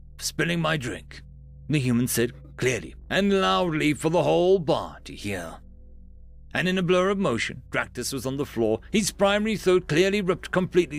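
Mains hum at 60 Hz runs through the whole clip, from a ground loop or nearby transformer coupling the power line into the signal. It sounds like a steady low drone about 25 dB below the audio, and a spectrogram shows it as an unbroken horizontal line at 60 Hz.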